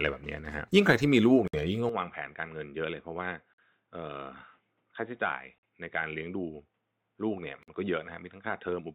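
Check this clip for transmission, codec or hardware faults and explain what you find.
Two faults are present in this speech: repeated silent gaps at joins between separately encoded pieces, and a sudden loss of bandwidth and level partway through.

A gap at a join of encoded pieces occurs at 1.48 s (about 59 ms), then at 3.54, 5.58 and 7.63 s (about 48 ms each), every 2 s. Untrimmed encoder delay and end padding leave dropouts in continuous speech. On the waveform these are flat stretches with smeared edges.

From 1.89 s the sound turns dull and boxy, likely from the input being switched to a poorer device. Nothing passes above 3.8 kHz, the level drops by about 10 dB, and new background noise sits about 45 dB down. A spectrogram shows the upper band vanishing at once, with no silence at the switch.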